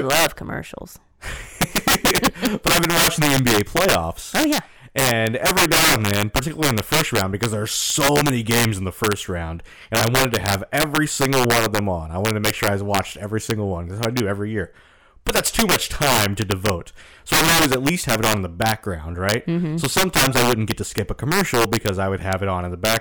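From start to finish the speech carries integer overflow: the signal is driven about 14 dB past full scale, and instead of being limited, each sample that exceeds the integer range wraps around to the opposite extreme. Only a few percent of samples cross that line, all on the loudest peaks, so those peaks snap into harsh, violent cracks far sharper than clipping. On a waveform, peaks jump from top rail to bottom rail; a spectrogram shows full-band vertical streaks.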